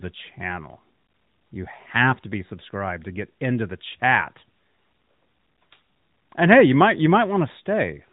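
Nothing goes wrong anywhere in this speech, so there's no fault to point to, just the narrowband phone-call sound you'd expect from an AMR-NB mobile path running at 12.2 kbps.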